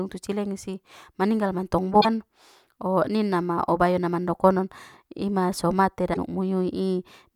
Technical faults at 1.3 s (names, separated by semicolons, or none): none